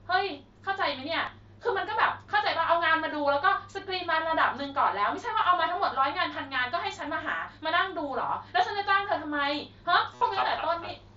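Speech with concealed Bluetooth headset packet loss at 1.26 s, 5.43 s and 10.15–10.21 s. The last shows repeating waveform cycles and an evenly spaced, buzzy harmonic band on a spectrogram.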